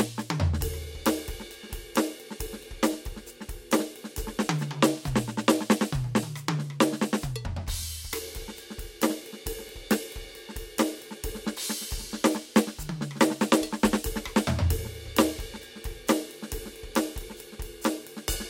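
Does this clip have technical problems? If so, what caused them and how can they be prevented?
No, this music clip has no technical problems, so there is nothing to trace back or prevent.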